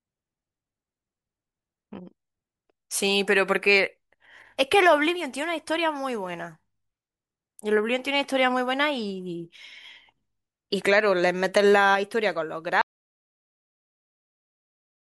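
At 12.81 s the speech cuts off abruptly and the clip falls into silence, with no room tone, right through to the end at 15.13 s. This is an audio dropout to silence, most likely the input being lost while the recorder kept writing zeros.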